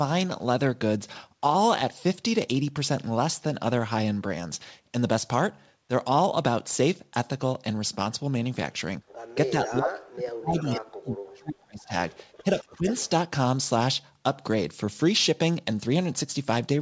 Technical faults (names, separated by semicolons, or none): background gated by the echo canceller; speech suppressed in double talk; echo leak